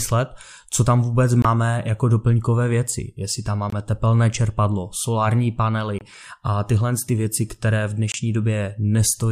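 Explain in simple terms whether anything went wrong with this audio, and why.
Four short gaps break up the speech, at 1.42–1.45 s, 3.70–3.73 s (just before "tepelné čerpadlo solární"), 5.99–6.01 s (before "a tyhle ty věci") and 8.12–8.14 s (after "ty věci které v"). Each lasts about 23 ms. The likely cause is a Bluetooth dropout. A chunk of audio, fitting one lost packet, arrived too late, so playback went silent and then resumed as if the sound had kept going.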